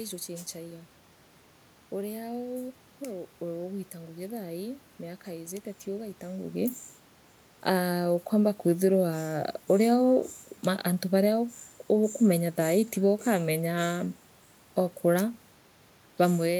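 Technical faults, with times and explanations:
No technical faults are present in this speech recording.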